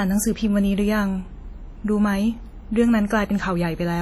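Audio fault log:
Throughout, likely WMA compression: the speech rings and sounds washy, with a hiss that swells and fades with it. Heavy quantisation noise from long transform blocks smears over tens of milliseconds and weak detail drops out, which fits a low bitrate near 32 kbps.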